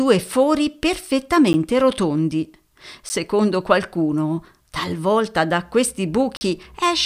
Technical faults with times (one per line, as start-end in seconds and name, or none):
1.53 block of digital silence
3.09 block of digital silence
6.37-6.41 block of digital silence